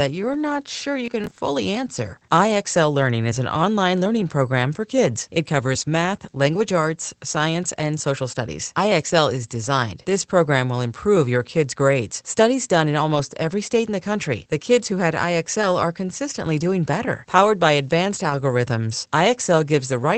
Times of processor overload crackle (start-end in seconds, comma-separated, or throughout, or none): 1.06-1.38